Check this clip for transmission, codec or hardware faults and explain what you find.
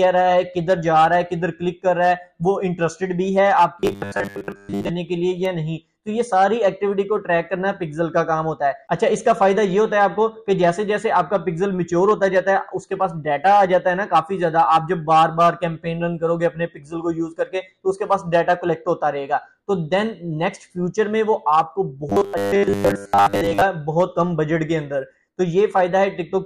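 Two bursts of robotic sound from repeated short buffers, 3.80 to 4.89 s and 22.10 to 23.62 s. Each imposes a rigid, metallic 100 Hz buzz, likely from 10 ms chunks being replayed through most of each stretch while fresh audio is skipped. Unlike dropouts, there is no gap.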